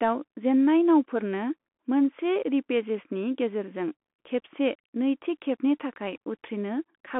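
Speech carried through a Bluetooth CVSD headset codec for the whole clip: a spectrogram shows nothing above about 3.8 kHz, a granular hiss floor, and scratchy sibilants from step-size overload.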